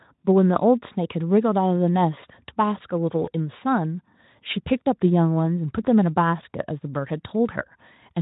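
At 3.25 to 3.29 s, VoIP packet loss concealed by the speech codec: about 20 ms of audio, one lost frame's worth, was filled by extrapolating from the previous pitch and filter at falling gain, giving a brief buzzy or noise-like, smeared patch before the cleanly coded Speex speech recovers.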